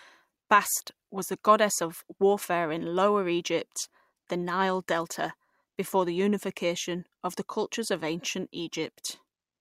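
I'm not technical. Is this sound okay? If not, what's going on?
Yes, no audible faults here.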